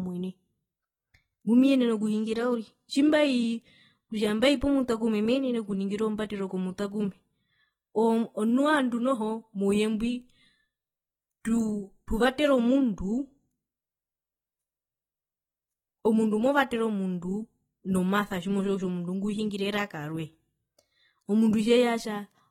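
Across the whole recording the speech sounds dull and smeared, with a warbling, fizzy texture on sibilants and held sounds, and nothing above about 19.4 kHz. Likely cause: AAC compression, AAC-LC at a low bitrate consistent with roughly 24 kbps, quantising away detail.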